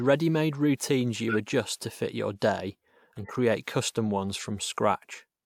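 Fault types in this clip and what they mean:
corrupt frame decoded: damaged compressed frames played as if valid put energy at the wrong frequencies, giving short chirpy noise bursts at 1.29–1.36 s, before "adjust to fit your", and 3.16–3.31 s, after "to fit your day".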